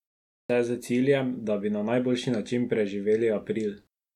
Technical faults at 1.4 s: none

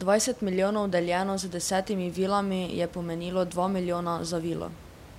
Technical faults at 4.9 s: none

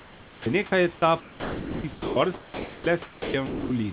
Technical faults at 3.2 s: sound dropped by the voice detector

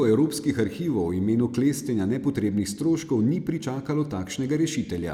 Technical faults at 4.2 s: none

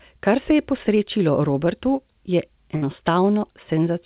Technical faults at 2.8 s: burst of packet loss

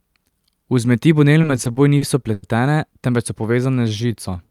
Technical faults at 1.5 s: repeated stalls (stutter)

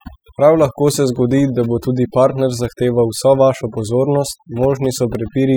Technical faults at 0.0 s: overdone noise removal

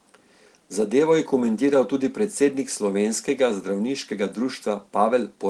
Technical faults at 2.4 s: none

